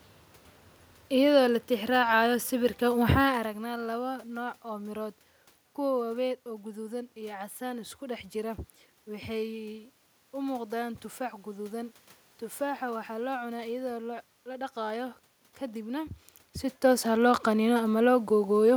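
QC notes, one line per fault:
Nothing stood out on listening to the speech.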